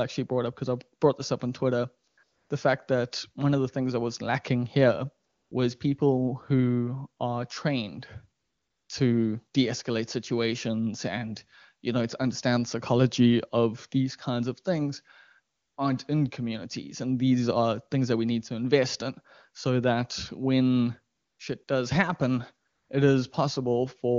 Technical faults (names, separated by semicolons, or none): AMR comfort noise